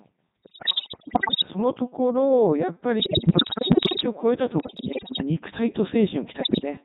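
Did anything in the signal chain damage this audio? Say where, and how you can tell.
Yes. Throughout, the speech sounds robotic and buzzy with heavy codec damage. This is the Codec 2 vocoder at 3.2 kbit/s: it sends only pitch, voicing, energy and a spectral envelope, and the decoder rebuilds the voice from sine waves instead of keeping the waveform.

In four bursts, at 0.43 to 1.48 s, 3.00 to 4.06 s, 4.60 to 5.22 s and 6.40 to 6.65 s, the voice jumps in pitch, level and tone colour and breaks into bleeps, warbles and robotic gibberish. These are bit errors on digital voice radio, at the network stage. Each corrupted bit sets parameters for a whole vocoder frame, and the error rate is around a fifth in the first burst, falling to roughly one in ten by the last two.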